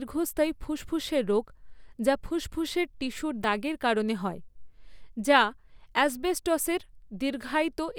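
A speech clip with a single dropped buffer (overrun) at 3.44 s, between "যা ফুসফুসের টিস্যুর" and "দাগের কারণে হয়". The sound jumps forward, skipping about 10 ms of audio with no gap of silence. The likely cause is samples not being read out before the input hardware overwrote them. On a waveform this appears as an abrupt discontinuity where two unrelated sections meet, and on a spectrogram as a thin vertical broadband line.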